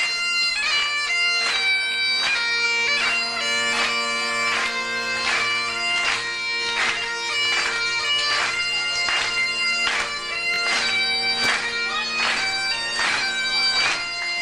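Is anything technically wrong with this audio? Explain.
Yes. A repeated buffer occurs at 1.92 to 1.96 s and again at 10.54 to 10.58 s. Fresh audio reached the output late, so the last block was replayed twice more, a length that fits a 20 ms buffer. Each event is a brief, buzzy stutter with hard joins, and no audio is lost.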